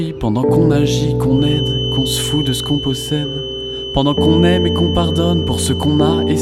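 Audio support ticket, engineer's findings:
Feedback whistle, 1.28 s onward. Steady 3 kHz tone about 10 dB under sound, level wavering. Likely speaker-to-mic loop sitting at feedback threshold.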